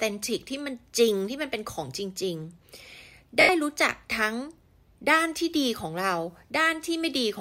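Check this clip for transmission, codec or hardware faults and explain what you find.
One transmission fault is audible. From 3.41 to 3.49 s, lost LE Audio frames leave an 80 ms gap, consistent with eight 10 ms frames. The LC3 decoder conceals them by repeating the last spectrum with randomised signs and fading it, so the sound briefly turns into a noisy smear. Light lossy compression is also present.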